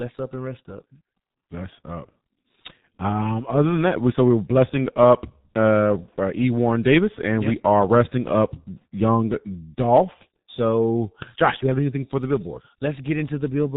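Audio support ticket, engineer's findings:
G.723.1 codec artefacts, whole clip, heavy. Speech muffled and hoarse, consonants smeared. Spectrogram: hard ceiling at 4 kHz, nothing above; harmonics blurred, formant transitions stepped rather than smooth. Waveform envelope looks coarsely modelled. Mechanism: voice model refreshed only once per 30 ms frame, fitting a roughly 6 kbit/s telephony coder. Probable component: VoIP gateway or trunk negotiating G.723.1.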